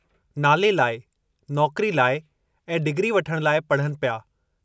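The speech recording has no audible technical faults anywhere in the signal.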